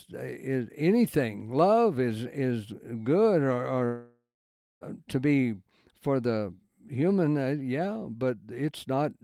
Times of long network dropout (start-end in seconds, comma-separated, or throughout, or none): 3.85-4.84